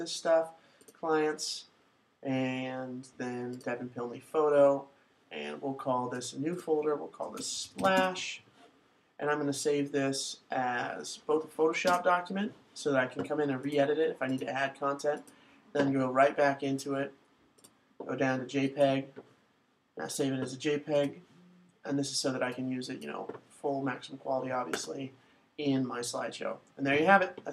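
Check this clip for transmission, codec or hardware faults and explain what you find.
No transmission, codec or hardware faults can be heard anywhere in the recording, and the signal holds steady throughout without any breaks or disturbances.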